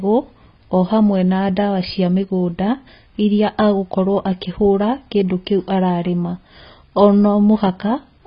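From start to finish the speech sits under heavy AAC compression damage. Nothing gets above about 5 kHz, so everything sounds dull and boxed-in. Sibilants come out fizzy and smeared, and sustained vowels pick up a watery warble. That's likely AAC-LC running at a very low bitrate, something like 16 kbps, where the encoder drops the top end and leaves gaps in the spectrum or patches them with noise.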